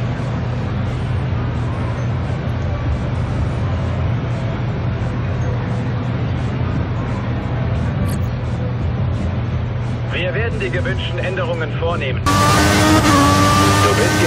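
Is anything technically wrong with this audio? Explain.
No, nothing technically wrong.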